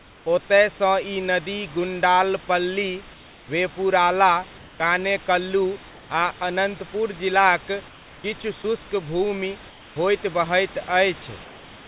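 From 3.14 to 3.48 s, just before "वेपुराला कानेकल्लू", the room background drops out. Comfort noise replaces it. The sender likely paused transmission during silence. A flat, featureless hiss fills the gap, about 2 dB quieter. It recurs at 4.58–4.80 s, at 7.88–8.24 s after "आ अनन्तपुर जिलाक", and at 9.70–9.96 s before "होइत बहैत". The later two are about 3 dB down.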